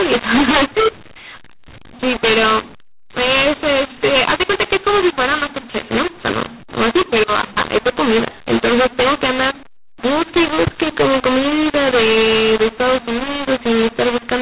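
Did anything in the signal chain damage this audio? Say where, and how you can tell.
Yes. Harsh, grainy distortion runs through the whole clip and the pauses fill with noise. At the codec stage, a mu-law and A-law mix-up decoded G.711 mu-law audio as A-law, scrambling sample levels.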